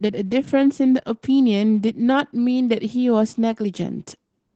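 From start to finish the speech carries Opus voice compression, and it's plainly audible. The top end stops around 8 kHz, and the linear-prediction coder is rebuilding the voice from a coarsely coded excitation, so it comes out muffled, a bit hoarse and faintly robotic. That's the sound of the SILK side of Opus working hard, and it fits something around 12 kbps, likely with 20 ms frames.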